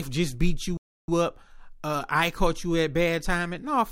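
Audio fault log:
0.77–1.08 s, playback stall: the player most likely ran short of buffered data or had its output thread held up, so nothing reached the output for about 0.31 s. The speech cuts off abruptly in mid-flow and the gap is dead silence rather than a fade or a repeated fragment. When output returns, the speech goes on, leaving a clear hole in the delivery.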